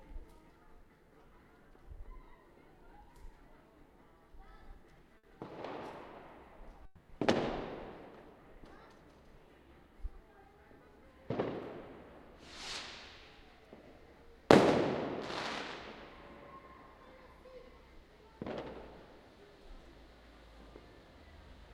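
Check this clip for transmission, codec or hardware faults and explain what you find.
Two transmission faults turn up, about 1.6 s apart.

Burst of packet loss, 5.17 to 5.26 s. A short run of packets failed to arrive in time, so the receiver had nothing fresh to play for about 60 ms. It filled that gap by extending the last sound it had and fading it down. You hear a brief held buzz or hiss that dies away, then the audio picks up again further along, with about 60 ms of the original sound skipped.

Long network dropout, 6.85 to 7.12 s. Here the audio gives way to a concealment tail lasting about 240 ms. The last sound is stretched and fades steadily, never reaching true silence before the audio returns. When it resumes, the stretch that should have played in between, about 240 ms, is simply gone. The likely cause is a longer interruption in the network stream, with the receiver concealing the gap rather than going quiet.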